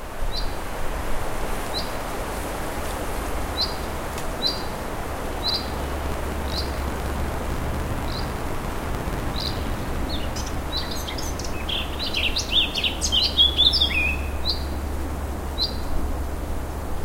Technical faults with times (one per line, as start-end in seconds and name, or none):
5.50-9.96 buffer tearing